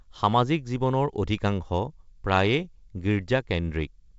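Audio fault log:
No fault found; the speech runs through G.722 wideband telephone coding at what sounds like the full 64 kbit/s rate, with any coding damage faint at most.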